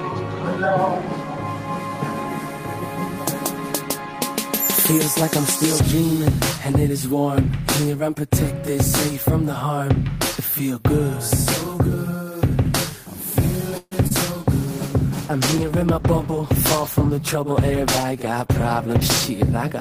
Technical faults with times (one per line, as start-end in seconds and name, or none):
13.77-13.93 call audio freeze
14.07-14.12 short concealed packet loss
14.63-19.32 call bitrate drop
16.30-18.33 jitter buffer speed-up
18.86-19.67 jitter buffer speed-up